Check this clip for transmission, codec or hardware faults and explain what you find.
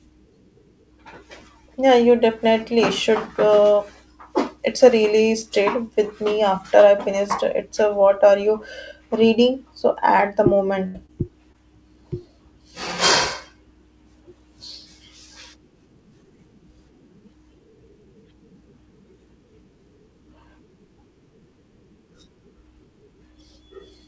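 Three packet-loss faults occur close together, all between 10.86 and 11.56 s in this speech clip. They sit on a call-codec path whose band stops at 8 kHz, which fits G.722.

From 10.86 to 10.96 s there is a burst of packet loss. The sound stretches into a held buzz or fading hiss that dies away, and then the speech picks up further along. About 80 ms of the real signal never arrived, so the receiver carried the last sound forward and faded it across the hole. The audio that should have filled those 80 ms is simply gone.

At 11.06 to 11.13 s and again at 11.52 to 11.56 s, short concealed packet loss appears as a brief smear or wobble, and a quick sound may drop out. In each case about 20 ms of audio missed the decoder. The receiver extended the preceding sound, pitched if it was voiced and as shaped noise if it wasn't, then cross-faded back into the real signal. At 11.06 s the stitch also trimmed about 3 ms.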